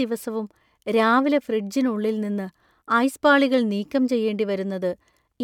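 No technical faults can be heard anywhere in the recording.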